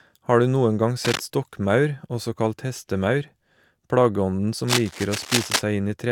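A worn cable or connector being moved is the likely cause: its contact resistance jumps erratically, adding cable scratch noise about 5 dB below the speech. Dense, uneven scratching rustles over the speech from 1.04 to 1.21 s, then longer from 4.67 to 5.62 s.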